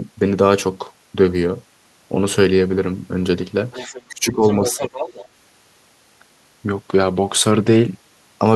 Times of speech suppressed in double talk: 4.08-4.82

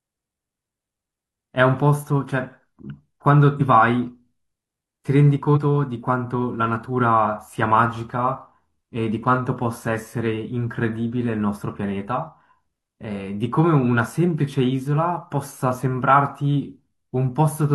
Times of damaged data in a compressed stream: 3.56-3.61, 5.53-5.58

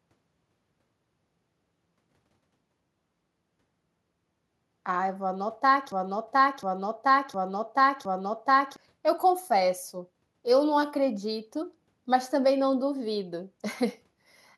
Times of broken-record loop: 5.92-8.76

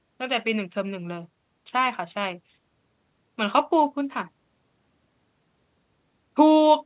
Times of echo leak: none

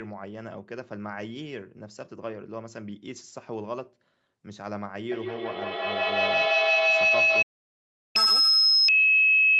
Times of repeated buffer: none

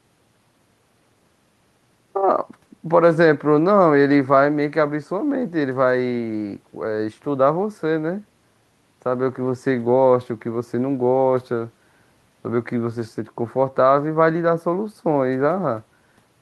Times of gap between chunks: none

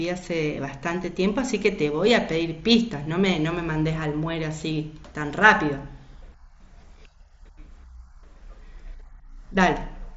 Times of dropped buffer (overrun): none

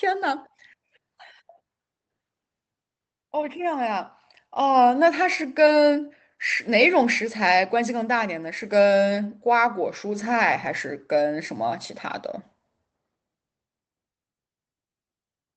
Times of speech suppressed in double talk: none

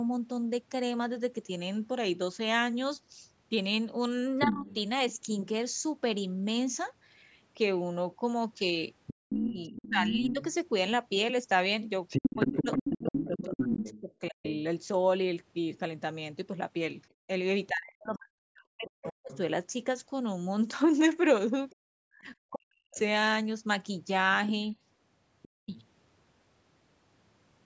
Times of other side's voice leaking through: 4.41-4.75, 9.06-25.85

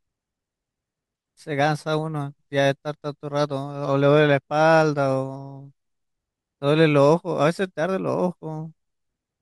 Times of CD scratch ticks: none

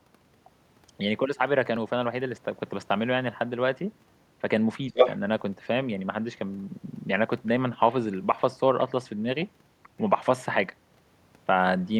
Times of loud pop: none

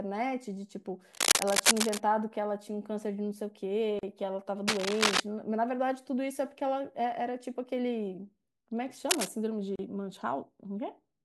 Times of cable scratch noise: 1.14-1.98, 4.68-5.20, 9.09-9.28

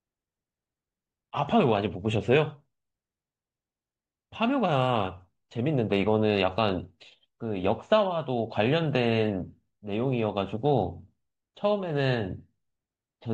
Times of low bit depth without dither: none

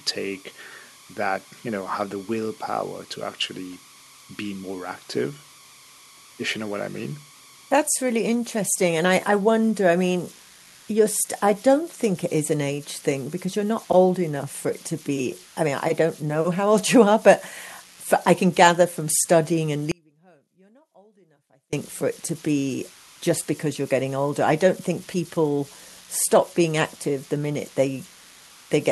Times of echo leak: 24.97-25.03, 25.49-25.64, 27.19-27.39, 27.97-28.67

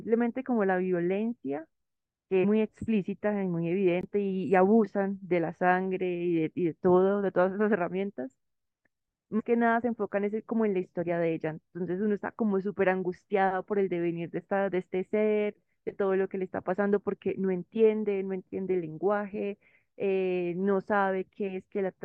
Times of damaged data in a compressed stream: 2.43-2.45, 9.39-9.41

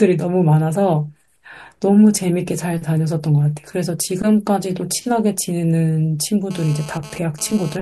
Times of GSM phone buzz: 6.51-7.77

